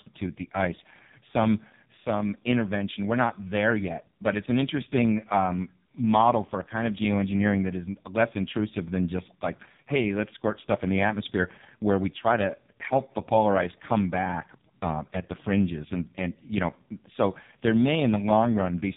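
Speech passed through an AMR narrowband mobile codec for the whole clip, with heavy damage. Nothing above 3.7 kHz survives, so the voice sounds boxed-in and phone-like. At such a low bit budget the vocal-tract model and sparse pulse excitation leave it buzzy and synthetic, which fits the lowest AMR-NB mode, around 4.75 kbps. A spectrogram would show a flat, hard ceiling at 3.7 kHz with empty space above it for the full duration.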